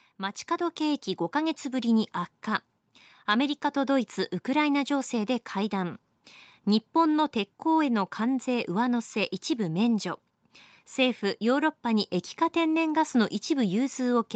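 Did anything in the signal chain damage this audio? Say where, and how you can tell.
Yes. From 0.17 to 3.05 s, speech and background swell together by about 4 dB. This is automatic gain rising in call processing, where the AGC lifts a quiet input.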